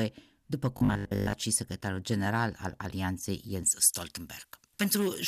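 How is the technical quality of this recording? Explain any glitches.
Two glitches affect the recording, one brief and one running to the end.

Robotic sound from repeated short buffers, 0.77 to 1.33 s: a rigid, metallic buzz at 50 Hz replaces most of the sound. This is likely a starved playback buffer repeating its last 20 ms, which imposes that fixed pitch while real audio is skipped.

Pre-emphasis left on, from 3.63 s to the end: the treble boost applied for recording or transmission, matching a J.17 curve, was never undone, leaving 10 kHz about 11 dB hotter relative to 1 kHz. The sound turns thin, bright and sibilant.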